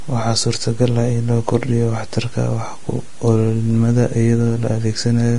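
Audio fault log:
Throughout: Vorbis compression. Nothing is present above 10.6 kHz, and the remaining treble of the speech is hissy and grainy, with consonant onsets smeared and voiced tones roughened. This is likely heavy Vorbis coding at a low quality setting, consistent with a bitrate near 32 kbps. The encoder has lowered its cut-off and quantised the upper-band residue so coarsely that fine detail is replaced by noise of similar energy.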